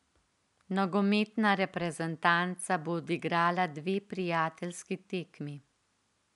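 No technical faults can be heard in the speech. Faint room noise sits about 48 dB below the speech, which is part of the recording space rather than anything the system introduced.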